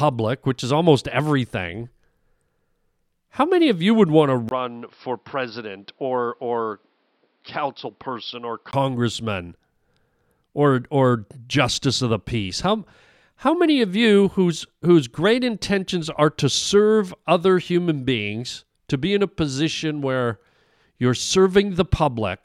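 At 4.49 s, right after "you would want to", the speech drops out for about 20 ms and then returns duller, boxier and a few decibels quieter, with a new background noise roughly 40 dB below the speech. This lasts until 8.73 s. The likely cause is an input switched to a poorer device. On a spectrogram, everything above 5.6 kHz vanishes for that stretch. The waveform shows a brief gap and a lower envelope.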